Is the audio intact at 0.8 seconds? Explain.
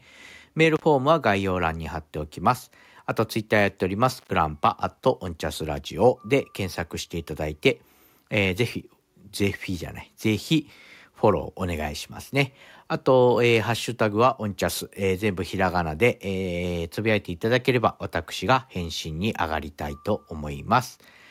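No. The speech drops out from 0.76 to 0.82 s, an intermittent contact. A loose cable or plug briefly breaks the connection, here for about 53 ms. The sound cuts off with crackle at both edges. Faint hiss remains during the gap.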